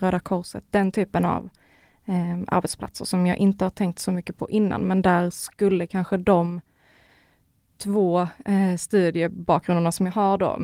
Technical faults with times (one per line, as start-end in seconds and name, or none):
none